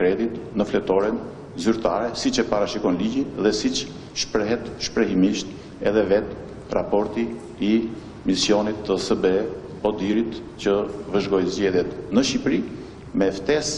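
At 10.14 s, two stream segments overlap: the timestamps of consecutive pieces of the stream, cut roughly every 6 s, claim the same stretch of time, and the player trims the shared portion even though that sound was never actually duplicated. About 7 ms of real audio is discarded and the waveform jumps straight from one point to another, which comes across as a brief click or tiny skip in the sound at that moment.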